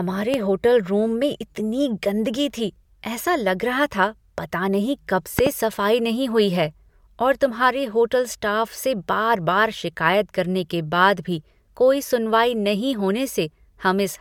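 Speech, with a loud pop at 0.34 to 0.36 s, about 15 dB above the sound, and a double pop from 5.39 to 5.49 s, about 20 dB up, between "था पता नहीं कब" and "सफाई नहीं हुई है". Speech carries on underneath both, likely from voltage pulses from a plug, switch or static.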